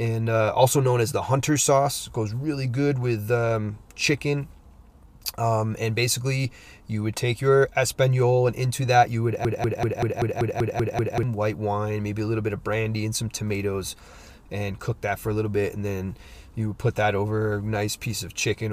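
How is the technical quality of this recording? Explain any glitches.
The recording has one clear glitch. A broken-record loop runs from 9.45 s to 11.23 s, just after "into that you would": a fragment of about 0.19 s repeats exactly, back to back, nine times, giving a rapid stuttering judder before the speech picks up again at "white wine maybe a". The likely cause is a player, encoder or stream that stalled and kept resending the last piece it held, so the speech that belonged in that stretch is lost.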